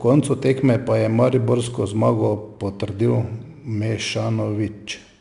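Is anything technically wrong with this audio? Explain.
Yes. The speech carries 4-bit ADPCM compression throughout the clip. Each sample is coded as a coarse 4-bit step from a predicted value, so the quantisation error becomes broadband noise that rises and falls with the speech level. It is plainly audible as a gritty hiss on louder syllables, with roughness on sharp onsets. A spectrogram shows a noise floor riding beneath each syllable and nothing above 10.6 kHz, which fits a rate of about 89 kbps.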